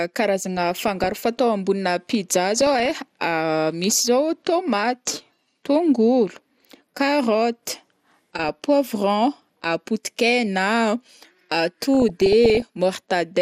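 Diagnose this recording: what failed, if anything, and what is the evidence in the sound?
The speech is dull throughout, with a gurgling, granular edge. This points to the codec stage, likely MP2 compression at a low rate, which fits an 80 kbps stream. Too few bits switch upper sub-bands off and coarsely quantise those left.

DAB burbling sits on top, at 0.57–1.25 s, 2.56–3.01 s, 8.39–8.54 s and 11.95–12.62 s. Short blips of noise come and go. This is a reception fault. Bit errors of well under one percent slipped past error correction, putting noise blips into single sub-bands.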